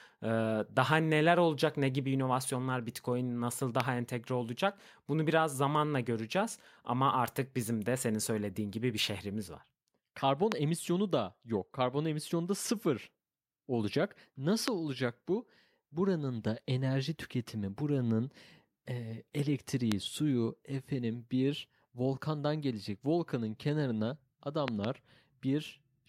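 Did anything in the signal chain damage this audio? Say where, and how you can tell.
Yes. There are loud pops, most likely from voltage steps in the analogue wiring, such as a loose connector, a switch or a static discharge. Each step enters the signal as a short pulse that the following circuits shape into a sharp click, roughly 20 dB above the speech, while the speech carries on underneath. Single pops sit at 3.80–3.82 s (just before "entegre olacak bunu biraz"), 10.52–10.54 s (before "emisyonu da yok"), 14.68–14.70 s and 19.92–19.94 s (before "suyu efendim bir volkandan"). At 24.68–24.87 s two pops come in quick succession.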